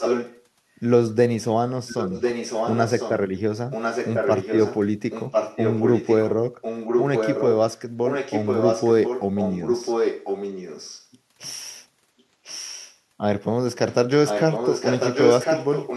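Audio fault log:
0.00–0.44, 1.87–3.18, 3.71–4.79, 5.10–6.17, 6.61–7.53, 8.07–11.08, 12.18–12.97, 14.26–15.97 s: echo leak. A distinct copy of the speech returns about 1.05 s late, not a reverberant smear. It is nearly as loud as the original at the start, somewhat quieter in most stretches, and much fainter at 12.18 s. Its likely cause is a far-end loudspeaker whose echo canceller let its microphone pickup back into the call.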